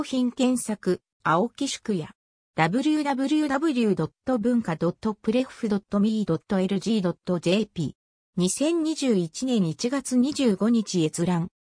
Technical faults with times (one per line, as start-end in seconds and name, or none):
none